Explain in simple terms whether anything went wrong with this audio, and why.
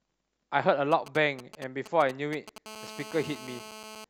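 From 0.92 to 2.58 s there are GSM signalling bursts: a nearby 2G phone's radio pulses get picked up as galloping ticks and short 217 Hz buzzes under the speech. Then from 2.66 to 4.05 s it turns into steady GSM phone buzz, a hard, raspy 217 Hz drone as that phone settles into a call.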